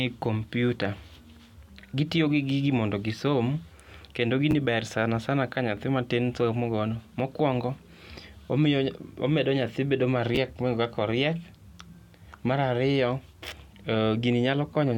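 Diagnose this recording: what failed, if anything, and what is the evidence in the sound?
Chunks out of order occur twice in this speech recording, at 4.51 to 4.53 s and at 10.35 to 10.37 s. Each is a brief jumbled flicker. The stage is buffer delivery, in the driver or a network jitter path. A 10 ms block arrived one slot late and was played after its successor, so the two adjacent blocks swap places. No audio is lost, but the swap creates three hard discontinuities around each event.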